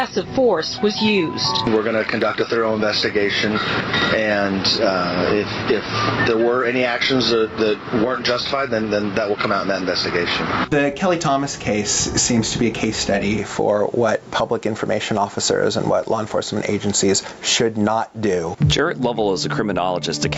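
Throughout the clip, gain pumping, with a swing of around 20 dB, likely from gain set far too high feeding a fast limiter. The call path limits the band to 8 kHz.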